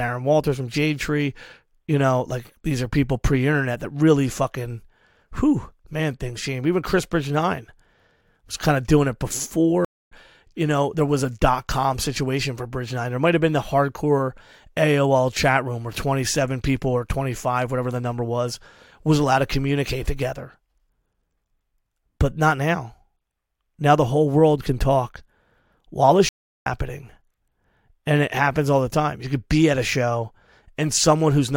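At 9.85 s the speech drops out for about a quarter of a second, returning at 10.12 s slightly ahead of where it left off, with around 150 ms skipped. At 26.29 s a longer gap of roughly 360 ms follows, ending at 26.66 s, and this time about 0.4 s of speech is missing. Both are stream reconnects: the connection broke, playback went silent, and a fresh decoder picked the live stream up at a later point.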